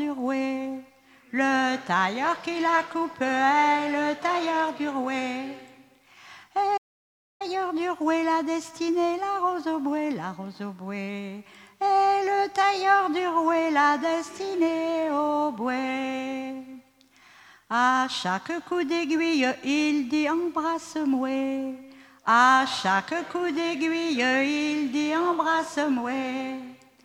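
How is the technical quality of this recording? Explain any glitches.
One glitch stands out: a playback stall from 6.77 to 7.42 s. The sound drops abruptly to silence for about 630 ms, then resumes, likely because the player ran short of data or its thread was briefly blocked.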